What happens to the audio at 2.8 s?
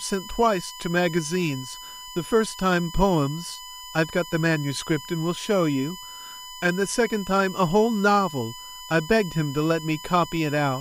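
At 2.8 s the speech sits on top of USB whine, which runs through the whole clip rather than starting there. Current drawn by the USB bus in 1 ms frames is leaking into the audio through a shared power or ground path, so a steady, fixed-pitch tone at 1 kHz rides under the speech, with its strongest component at the 3 kHz harmonic. It sits only about 15 dB below the speech.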